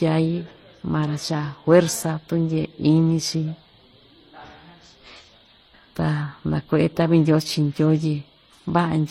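From start to finish the speech carries two layers of coding damage at once, the signature of transcoding between lossy codecs. There is nothing above 16.2 kHz, and within that band a swirly, watery smear from MP3-style quantisation sits under a second, metallic grain typical of HE-AAC. The combination points to a low-rate MP3, likely somewhere near 35 kbit/s, that was re-encoded to HE-AAC at a similarly low rate, with the later encoder spending its bits on the earlier artefacts.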